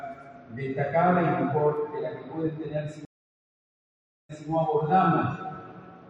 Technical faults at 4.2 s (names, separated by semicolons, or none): stream reconnect